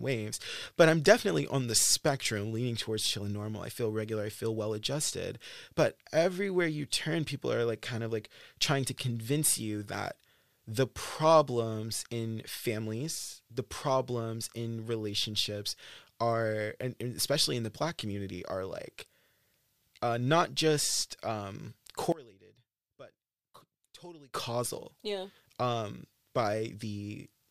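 After "uh not just um", from 22.12 to 24.34 s, the speech drops about 23 dB to a faint residue, likely one channel inverted cancelling in mono, unlike a dropout's silence.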